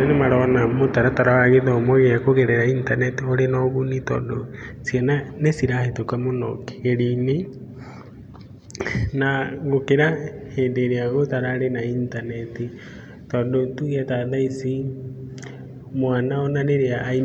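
Nothing goes wrong anywhere in this bit of speech, so there's no technical fault to walk through.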